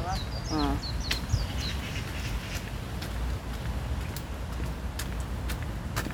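Sound recording, no technical faults detected anywhere in the clip.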